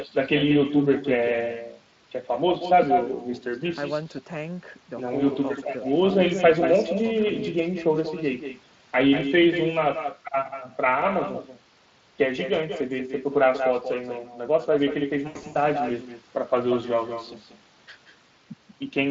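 Echo with no canceller runs through the whole recording. The far end is evidently playing the call over a loudspeaker, and its microphone feeds that sound back with nothing to cancel it. The talker is shadowed roughly a fifth of a second later by a copy about 9 dB quieter and thinner than the direct sound. The delay sits in the range where it is heard as a distinct repeat rather than added reverberation, so each syllable seems to trail a ghost of itself.

VoIP packet loss concealed by the speech codec hits from 15.27 to 15.57 s. About 180 ms of audio goes missing in several gaps spread over 280 ms, the longest lasting 80 ms, which fits roughly nine lost 20 ms frames. In each gap the Speex decoder keeps extending the last pitch and spectral shape at falling gain, so the sound smears into a buzzy tone or coloured noise that fades. Because each frame is rebuilt from the one before, the signal stays weak or distorted for a moment after real packets resume. 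Outside the gaps, the Speex coding itself at 23.8 kbps adds only light coloration.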